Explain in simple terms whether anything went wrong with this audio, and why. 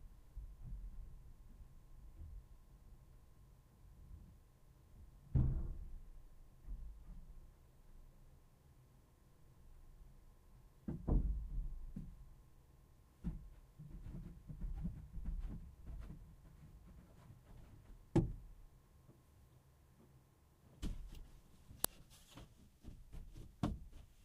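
At 21.84 s there is an uninitialised buffer: a loud crack, because leftover memory garbage was played, fitting a 128-sample block.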